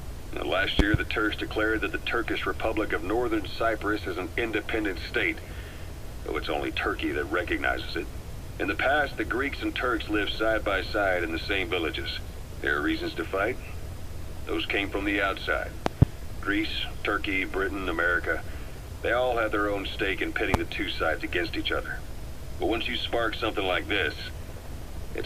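A loud pop, doubled, hits at 0.79–0.97 s and again at 15.86–16.05 s. A single pop follows at 20.54–20.57 s. Each jumps far above the sound, likely from a voltage spike.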